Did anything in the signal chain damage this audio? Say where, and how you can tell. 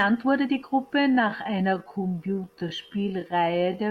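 Yes. From 1.0 s to the end, right after "wurde die", the speech slows abruptly to about 0.65 times its pace while pitch holds, which likely points to a time-stretched section. Repeated short grains make the speech drag. A spectrogram shows harmonics at unchanged frequencies but drawn-out syllables.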